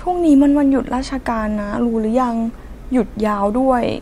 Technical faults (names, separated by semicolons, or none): none